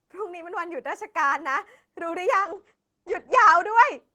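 A call bitrate drop runs from 2.41 s to 4.07 s. The connection's bandwidth estimate fell, so the encoder had to squeeze the speech into far fewer bits. The sound is consistent with a fall from roughly 32 kbps to 10 kbps, held at its lowest for 1.21 s. The audio band shrinks from 20 kHz to 8 kHz, leaving the speech muffled, and the coarser coding adds a rough, watery texture.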